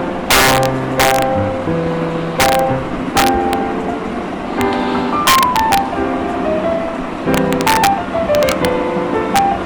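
Integer overflow cracks occur at 0.31–1.22 s, 2.40–2.59 s, 3.17–3.53 s, 4.61 s, 5.27–5.78 s, 7.34–7.87 s, 8.35–8.65 s and 9.36–9.39 s. On these loud passages the level runs past the integer ceiling, by about 7 dB in the first and about 1 to 4 dB elsewhere. Instead of being limited, each excess peak wraps to the opposite extreme, producing harsh cracks far sharper than ordinary clipping.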